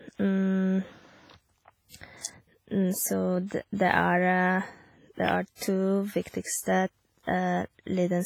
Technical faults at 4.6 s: WMA compression

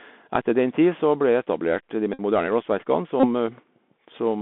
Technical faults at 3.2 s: Bluetooth CVSD headset codec; Bluetooth headset packet repeated

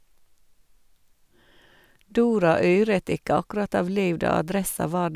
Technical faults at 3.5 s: none

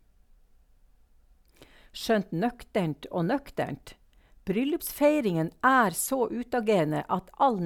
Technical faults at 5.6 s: none

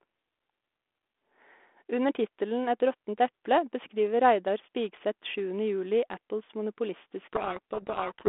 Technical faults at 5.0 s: none

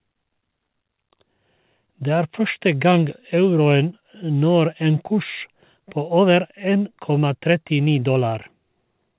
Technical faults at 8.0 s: none

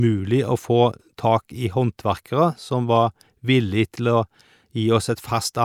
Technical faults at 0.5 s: none

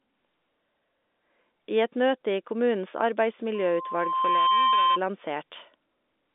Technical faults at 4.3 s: loudspeaker feedback squeal

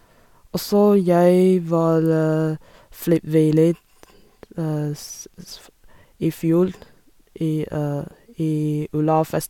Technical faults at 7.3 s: none

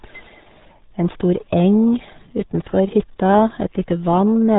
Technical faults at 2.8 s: RealAudio 14.4 codec

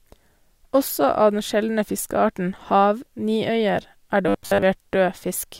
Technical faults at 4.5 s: robotic sound from repeated short buffers

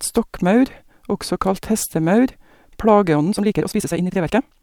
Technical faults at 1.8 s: none

